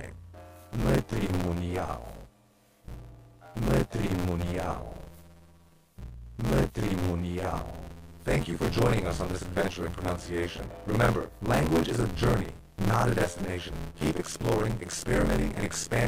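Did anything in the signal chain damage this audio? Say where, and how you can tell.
Yes, a steady robotic rattle near 86 Hz runs throughout whenever sound is present. This is buffer tearing in the driver buffer: roughly half of each period replays audio about 40 ms old, and the 86 Hz rattle rate fits a 512-sample buffer.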